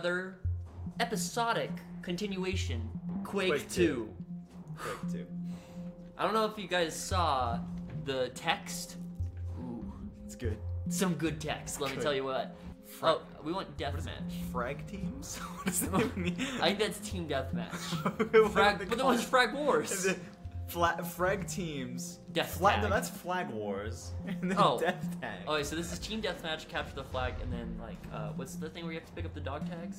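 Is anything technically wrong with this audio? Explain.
No, the signal shows no technical faults at any point in the recording.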